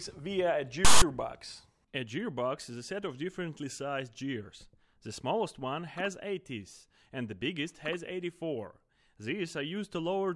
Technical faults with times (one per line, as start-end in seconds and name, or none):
0.85-1.02 file tags played as audio